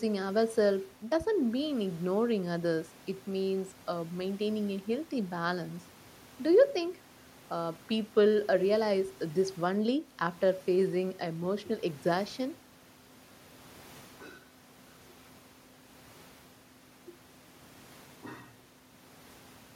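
Nothing in this speech recording stands out as a technical fault at any point, so there's nothing to flag here.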